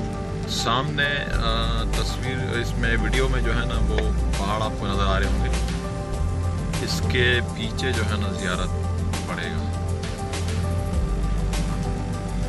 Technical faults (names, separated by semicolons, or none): block size mismatch (truncated)